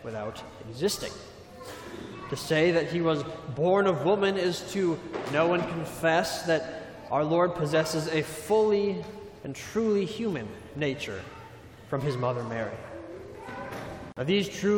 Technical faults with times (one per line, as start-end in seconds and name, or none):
14.12-14.17 gap at a join of encoded pieces